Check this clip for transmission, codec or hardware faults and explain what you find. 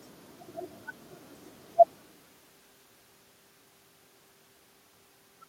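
No transmission, codec or hardware faults turn up in this speech recording. A background noise from the room sits under it, and around two seconds the level shifts as the talker changes distance from the microphone; both are part of the recording itself.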